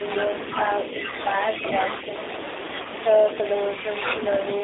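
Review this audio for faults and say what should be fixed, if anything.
The speech sounds narrow, slightly rough and synthetic across the whole clip, with nothing below about 300 Hz or above about 3.7 kHz. This is the G.729 codec. It rebuilds each 10 ms frame from a vocal tract filter, a pitch predictor and a few coded pulses rather than sending the waveform. The damage is plainly audible and fits an 8 kbit/s G.729A stream. To prevent it, use a wideband codec such as G.722 or Opus at a higher bitrate.

At 1.10 to 1.16 s and again at 2.83 to 2.87 s, the speech briefly smears into a buzzy tone or coloured noise that fades before recovering. This is VoIP packet loss concealed by the speech codec. Each gap points to a single lost 20 ms packet. The decoder filled it by repeating its last pitch and filter at falling gain, and because each frame builds on the one before, the sound stays weakened for a short time after the packets return. 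To prevent it, reduce network loss or add jitter buffering and forward error correction.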